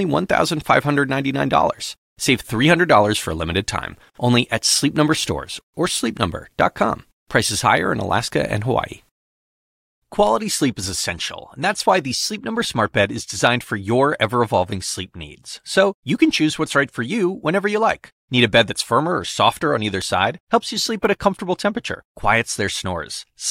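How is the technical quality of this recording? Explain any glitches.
Four bit error spikes mar the speech, at 10.27, 11.90, 20.02 and 21.05 s. Each is a flipped bit jumping one to three samples by a power of two, peaking about -23 to -11 dBFS. Each is a lone, broadband tick. Unlike a dropout, nothing goes missing. Unlike a clipped peak, it is unrelated to the signal.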